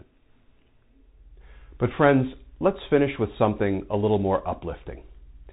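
Bluetooth CVSD headset codec throughout: one-bit delta coding, which fits 64 kbps, cuts everything above 3.8 kHz, leaving scratchy s sounds, overload distortion, and granular hiss under the speech.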